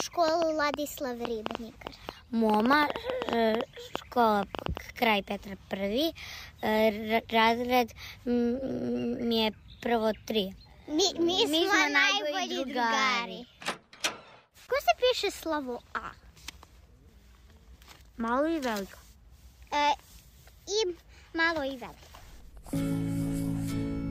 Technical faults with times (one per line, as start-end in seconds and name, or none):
0.00-4.78 train of clicks